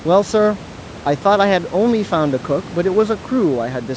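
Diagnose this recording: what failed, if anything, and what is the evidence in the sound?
Nothing failed: the speech carries the normal band limit of call microphone processing, with no content above 8 kHz, and the room noise sits about 20 dB below the speech, both ordinary properties of the capture path.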